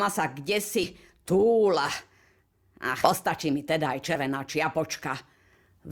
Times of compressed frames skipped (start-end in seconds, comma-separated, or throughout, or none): 0.83-0.86, 3.03-3.10, 4.15